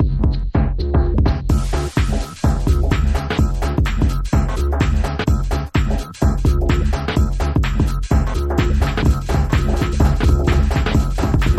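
A second capture path, likely running slower than the first, feeds the same audio into the mix from 8.81 s to the end, producing a doubled audio track. A full-band copy trails about a second and a half behind, a few dB quieter, starting abruptly with no decay or room colour.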